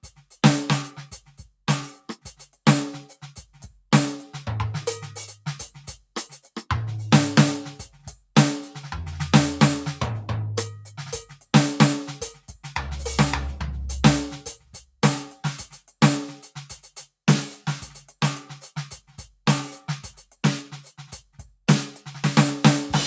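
Sound cut by the noise suppressor, from 0.03 to 0.37 s and again from 14.57 to 15.01 s: the call's noise suppressor mistook parts of the music for background noise and pulled them down. The first dip reaches about 8 dB and touches roughly a fifth of a second. The second goes deeper, about 12 dB, over nearly half a second, so held tones sag and their tails thin out. The audio, passed through call microphone processing, carries nothing above 8 kHz.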